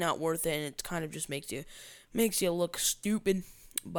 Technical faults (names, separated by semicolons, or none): none